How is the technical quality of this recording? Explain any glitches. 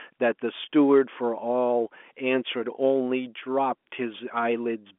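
Nothing stood out on listening to this telephone-band speech recording, so there are no glitches to explain.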